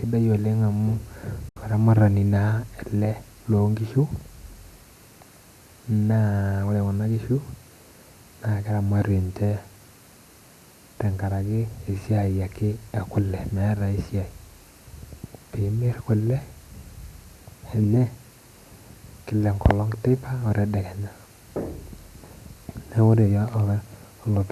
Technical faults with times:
1.49-1.57 digital broadcast dropout

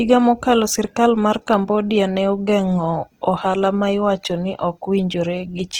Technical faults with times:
0.00-5.79 Opus compression

